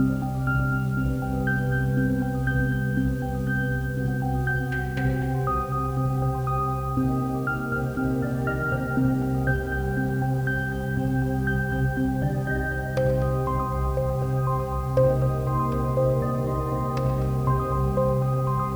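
From start to finish the sound carries a grainy, gritty edge that shifts with the signal itself. This is low bit depth without dither, likely from the audio being rounded to about 7 bits. With so few steps, the rounding error tracks the waveform instead of spreading as smooth noise. The distortion sits roughly 30 dB below the signal. Quiet passages turn rough. The softest moments sputter between steps or drop to silence.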